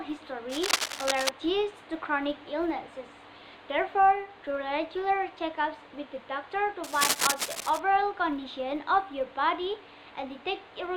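A steady buzz at 100 Hz runs under the sound for the whole clip. This is a filter restarted on every block. The filter drops its memory at each block boundary and starts again from silence. Each restart leaves a small transient, and these repeat every 10 ms. The buzz rises and falls with the level of the sound, because each transient scales with the signal entering the filter. Cable scratch noise appears twice, from 0.49 to 1.29 s and from 6.84 to 7.80 s. Each burst is a dense, uneven rustle, roughly as loud as the sound itself. It scratches over the sound while it lasts. The likely cause is a worn cable, connector or control being moved, so that its contact resistance jumps about rapidly.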